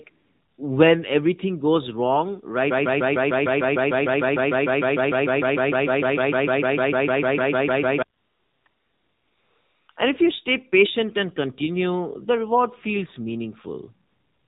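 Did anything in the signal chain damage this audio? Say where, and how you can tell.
Yes. At the codec stage, the whole clip went through an AMR narrowband mobile codec at 7.4 kbps. There's nothing above 4 kHz, and the speech has that buzzy, synthetic edge you get when a vocal-tract model with only a few pulses per subframe has to rebuild everything.

AMR comfort noise shows up in the call processing, where the discontinuous transmission kicks in. There's a blip at 0.04 s, then fills at 0.10–0.58 s before "when everything goes wrong", 8.18–8.66 s, 8.68–9.88 s, 9.92–9.96 s and 14.08–14.48 s. The real background drops out for smooth synthetic hiss that switches in and out.

There's a broken-record loop right after "when everything goes wrong". From 2.71 to 8.02 s a 151 ms fragment repeats back to back, 35 times, identical each pass. The audio that belonged there is gone. The likely cause is a stalled stream or player that kept resending its last buffer.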